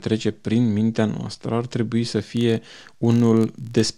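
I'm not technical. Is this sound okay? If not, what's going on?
No, there's a problem. From about 2.18 s, right after "noastră ar trebui să", until the end, the speech picks up a steady buzzy ticking. This is a filter restarted on every block. Audio is processed in small chunks, and here a filter forgets where it left off and starts each chunk from scratch, leaving a tiny click each time. Those clicks come about 47 times a second, which fits chunks of 1024 samples, so they blur into a buzz that gets louder and softer along with the voice.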